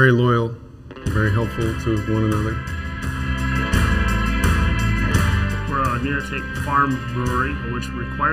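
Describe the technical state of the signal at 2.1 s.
At 2.1 s, as everywhere else in the clip, the sound carries channel delay (comb filtering). One channel arrives a little under a millisecond late, and when the two are summed to mono, shared content cancels at regularly spaced frequencies, the first near 700 Hz. The result is a hollow, phasey colour. A spectrogram would show fixed dark horizontal bands at evenly spaced intervals up the spectrum. The waveform itself would look unremarkable.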